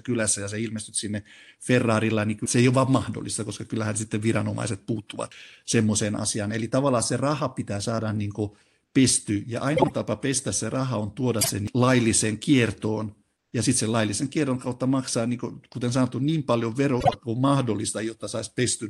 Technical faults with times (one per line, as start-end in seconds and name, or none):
9.76-9.91 frames out of order
11.41-11.50 frames out of order
17.00-17.14 frames out of order